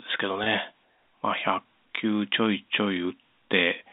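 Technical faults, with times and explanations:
0.44–0.46 s, packet loss with pitch repetition: a 20 ms gap, consistent with one lost packet, is bridged by repeating the last pitch period, giving a brief held, buzzy tone.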